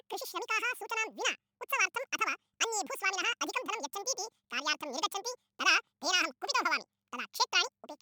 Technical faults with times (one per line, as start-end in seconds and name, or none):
0.00-8.01 audio read two samples at a time (double speed)